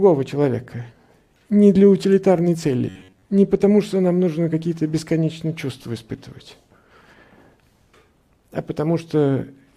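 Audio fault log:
2.89–3.29 s, robotic sound from repeated short buffers: a rigid metallic buzz at 93.8 Hz, likely from about half the audio being replaced by a repeated 11 ms chunk.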